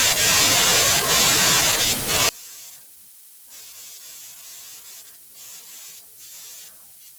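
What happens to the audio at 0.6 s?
Nothing goes wrong at 0.6 s; the speech carries on intact through that moment.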